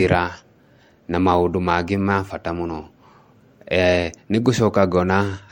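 Throughout, generation loss: swirly, hollow smearing and blurred attacks beyond what one 64 kbit/s MP3 pass would cause, nothing above 16.6 kHz, likely from about four encodes.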